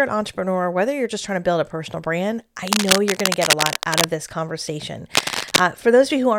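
A speech clip with cable scratch noise from 2.67 to 4.06 s, after "build a personal brand", and 5.14 to 5.60 s, after "this conversation": dense, uneven rustling about as loud as the speech, not sparse isolated clicks, likely from a worn cable or connector being moved.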